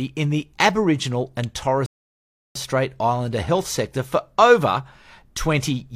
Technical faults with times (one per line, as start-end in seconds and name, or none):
1.86-2.55 rebuffering stall